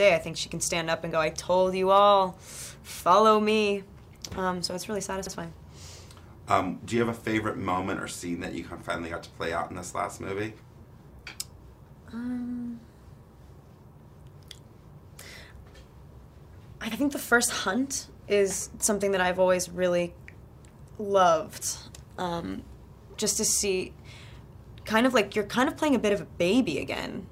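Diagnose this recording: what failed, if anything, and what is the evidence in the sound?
Repeated frames in the compressed stream. From 5.26 to 5.33 s, a 64 ms block plays a second time. It stutters and adds 64 ms.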